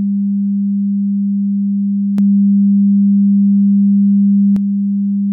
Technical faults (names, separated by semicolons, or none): doubled audio track